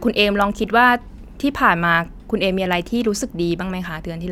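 No technical faults are audible.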